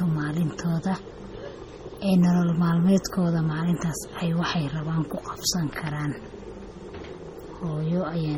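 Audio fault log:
Throughout, MP3 compression: the speech has a heavy watery, swirling quality, with metallic chirping on s sounds and smeared attacks. This is likely a low-bitrate MP3 encode, consistent with roughly 32 kbps. With so few bits, the encoder drops weak frequency lines, which switch on and off from frame to frame and cause the swirl. Sound still reaches about 20.2 kHz, so the damage comes from this flickering detail rather than a treble cut.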